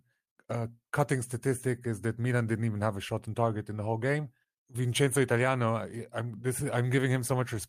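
No technical faults are audible.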